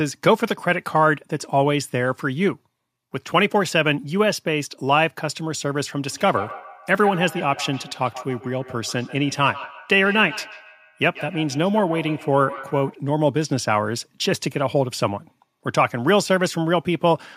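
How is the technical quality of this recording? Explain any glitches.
The recording has one clear fault. From 6.11 to 13.04 s there is feedback echo between two devices. A second device in the same room seems to be playing back this microphone's signal, and the microphone picks it up again. The local echo canceller only removes its own playback, so that returned sound gets through. The speech comes back at a fixed interval of roughly 150 ms. At its loudest, the echo sits about 15 dB below the speech.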